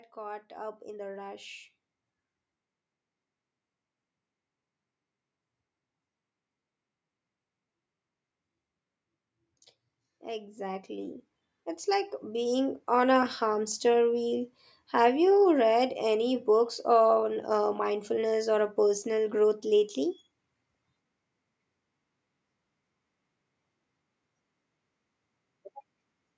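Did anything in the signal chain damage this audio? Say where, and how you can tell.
Yes. In the call processing, automatic gain rising lifts everything, speech and background together, by about 6 dB from 0.14 to 1.57 s, then about 5 dB at 10.23–11.25 s and 11.84–13.82 s. The AGC judged the input too quiet and ramped its gain up over a second or two.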